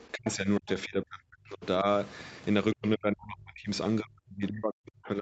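Speech suppressed in double talk, at 0.11–0.69, 0.85–1.64, 1.82–1.86, 2.74–3.69 s and from 4.01 s to the end: the speech drops out, likely an echo canceller muting both talkers. It shows as deep notches or gaps in the waveform and spectrogram, up to about 40 dB, with only a slight dip at 1.82 s.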